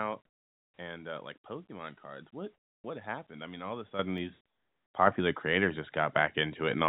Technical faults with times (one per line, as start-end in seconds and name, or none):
0.26-0.77 comfort noise in place of the background
2.54-2.84 comfort noise in place of the background
3.99 microphone volume stepped up
4.18 dropped samples
4.46-4.94 comfort noise in place of the background
5.07 microphone volume stepped up